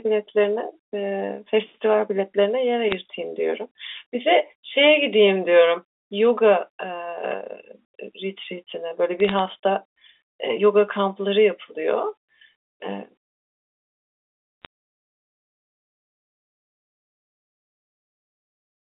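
Bit errors on a digital phone line are heard at 2.90 to 2.95 s, 9.20 to 9.39 s, and 14.65 s. Each burst is a short patch of sharp ticks over the speech. Some bits in the G.711 stream flipped, roughly two in every thousand. Each flipped bit corrupts one sample, so the ticks are single-sample spikes. The middle burst lasts longest. The narrow telephone band, about 300 Hz to 3.6 kHz, carries the ticks with the speech.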